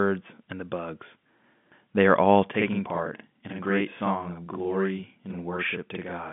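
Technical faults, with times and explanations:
2.52 to 6.32 s, channel delay (doubling): one channel starts running 46.4 ms late, which fits a 2048-sample buffer, and the two are summed to mono, so the speech gains a separate same-level copy, heard as a doubling or single slap echo within the telephone band.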